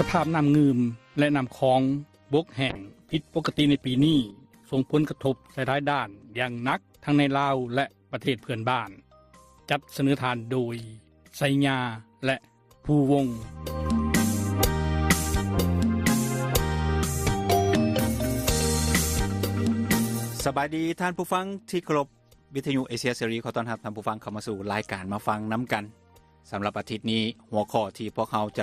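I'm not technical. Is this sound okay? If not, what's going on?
No. From 2.71 to 6.83 seconds the sound turns rough and muffled. This is a call bitrate drop: the connection's estimated capacity fell, so the audio was squeezed much harder.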